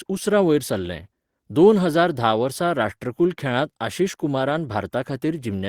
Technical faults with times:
4.49 lost packet rebuilt from error correction

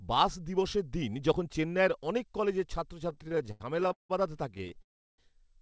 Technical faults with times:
3.10-4.11 repeated stalls (stutter)
4.51-4.80 repeated stalls (stutter)
4.82-5.20 call audio freeze

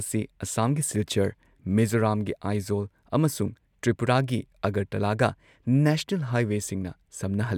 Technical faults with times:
none

